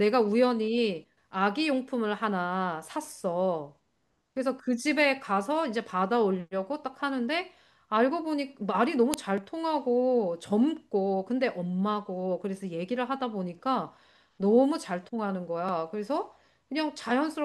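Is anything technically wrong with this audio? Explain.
Yes. At 9.14 s the speech carries a file header played as audio: a WAV piece's header bytes were decoded as samples where two segments join, giving a sharp, loud snap. On a waveform it shows as a near-instant spike; on a spectrogram, a thin full-band vertical line.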